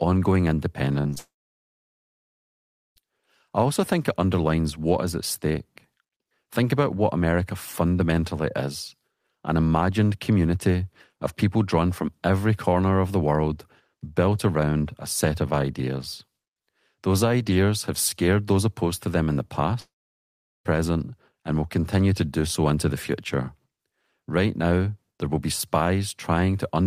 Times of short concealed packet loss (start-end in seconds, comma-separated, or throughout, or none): 1.01-1.18